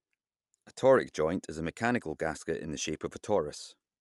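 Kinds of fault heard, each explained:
Bluetooth LC3 compression: The speech carries plainly audible coding damage and has nothing above 11.6 kHz throughout. This is likely LE Audio's LC3 transform codec, working in 10 ms frames at a rate that fits about 48 kbps, trimming the top band.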